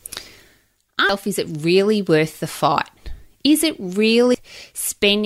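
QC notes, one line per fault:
1.09 s and 4.34 s, damaged data in a compressed stream: each is a brief glitch, the first just before "is it really worth". Corrupted bytes in the encoded stream make the decoder misread a frame and lose sync until it finds the next frame header, so the signal is briefly broken. On a spectrogram each shows as a thin vertical break in the speech harmonics; the waveform shows a brief discontinuity.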